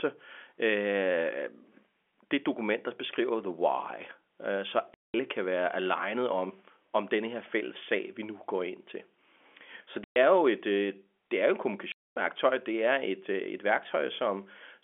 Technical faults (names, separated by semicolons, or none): packet loss filled with silence